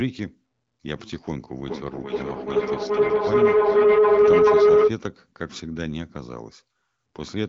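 From 1.66 to 4.94 s a steady tone near 400 Hz swells, pulsing roughly every 400 ms, until it sits about 12 dB above the speech. This is feedback howl: a microphone re-captures a nearby loudspeaker, so each lap through the loop comes back louder.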